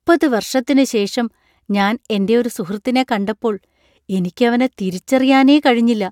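No technical faults can be heard anywhere in the recording. The speech runs for about 6.1 seconds, with nothing that calls for comment.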